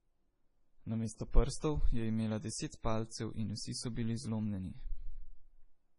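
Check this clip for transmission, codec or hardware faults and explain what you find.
One codec fault runs through the whole speech clip: MP3 compression, heavily applied. Nothing is present above 10.6 kHz, a hard treble ceiling typical of an encoder starved for bits. The damage is heavy, which points to a very low bitrate, on the order of 24 kbps. Weak frequency components drop in and out between frames, so the speech sounds watery and swirly, with metallic chirps on s sounds and smeared consonant attacks, most likely from aggressive MP3 encoding.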